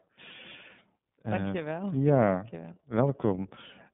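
Speech, coded throughout with the iLBC codec. The band stops near 3.6 kHz and rolls off below 150 Hz, giving a thin telephone sound. Each frame is coded on its own, which fits 30 ms frames at 13.33 kbps, so the voice sounds plainly rough and synthetic.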